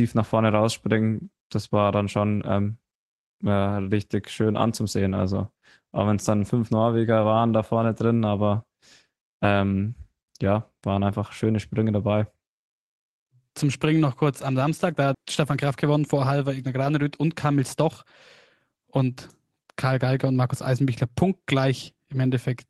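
At 5.15 s, a lost packet rebuilt from error correction: the decoder played a low-bitrate copy, leaving a brief rougher, noisier patch consistent with a single 20 ms packet, without a gap.

At 15.15 s, a CD skip: the laser jumped tracks, giving a tick, a very brief mute, then playback resuming from a different point on the spiral.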